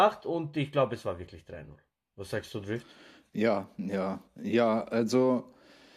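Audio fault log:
No faults detected in playback.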